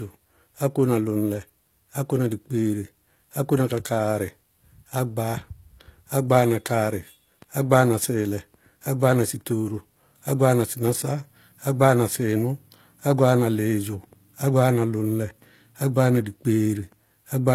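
Throughout, likely HE-AAC compression: unlike a plain low-pass, the treble up to 14.9 kHz is synthetic, copied upward, so s sounds turn gritty and metallic.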